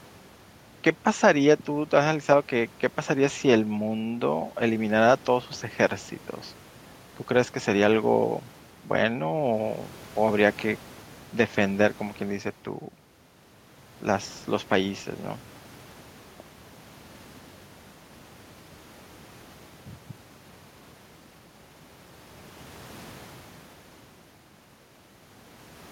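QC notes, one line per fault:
No technical faults are audible anywhere in the speech, with the signal holding steady in level and continuity for its full duration.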